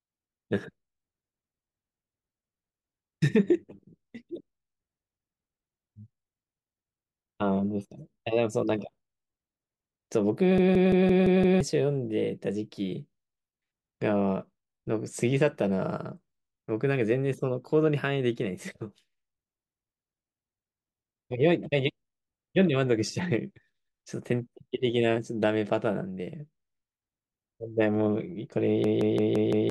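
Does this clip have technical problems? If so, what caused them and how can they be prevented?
Yes. From 10.58 to 11.61 s and from 28.84 to 29.70 s, the speech turns into a machine-gun stutter: one 171 ms slice repeats at about 5.9 per second. This is a system hang loop. The driver froze while the hardware kept replaying its ring buffer, which fits an 8192-sample buffer, and roughly a second of audio is lost each time. Running audio at real-time priority with a watchdog that mutes a stalled buffer would prevent it.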